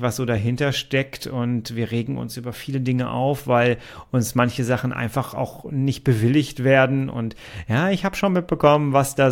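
A speech recording with no technical faults to be heard anywhere in it, so the signal arrives intact with nothing to locate or explain.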